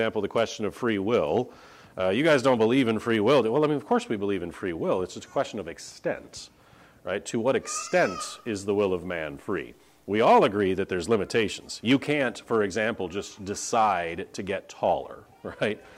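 From 7.81 s to 10.76 s the audio turns grainy. A rough error sits on top of the sound and moves with it rather than staying steady. This is the mark of low bit depth without dither. The likely cause is truncation to about 10 bits with no dither added. The rounding error then tracks the signal as distortion, around 45 dB below it. Quiet passages suffer most. Detail below one step is lost or sputters.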